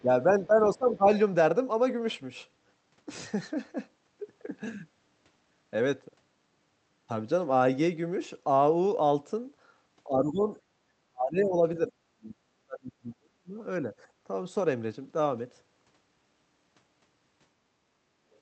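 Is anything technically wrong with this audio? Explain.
Yes. Speech suppressed in double talk occurs at 0.02–1.11, 10.06–10.49, 10.7–11.91, 12.08–13.58 and 13.85–13.91 s. The speech dips from slightly to nearly silent, deepest between 10.7 and 13.58 s, likely because an echo canceller turned the talker down while the other side spoke. The waveform shows abrupt envelope holes, and the spectrogram shows faded or blank upper bands.

The other side's voice leaking through appears at 18.33–18.39 s as a very faint, brief scrap. It is likely loudspeaker echo that the canceller left in the microphone signal. On a spectrogram it is a faint smear of harmonics, and on the waveform it is barely visible.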